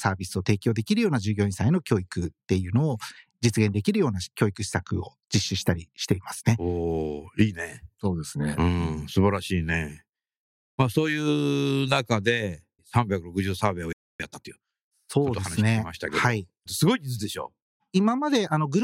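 At 13.93 s the player most likely ran dry of buffered data, or its playback thread was held up, and this produces a playback stall. The output drops to silence in the middle of the speech for about 270 ms, until 14.20 s. That gap is long enough to register as a clear hitch rather than a brief click or dropout. The speech then picks up again.

Straight after the stall, from 14.20 s to 14.72 s, time-compressed catch-up begins. The player has fallen behind, so it works off the delay by removing short slices of audio and cross-fading across each join. This runs the speech at 1.5 times normal speed for about half a second. The pitch stays where it was, but the talking sounds rushed before settling back to its normal pace.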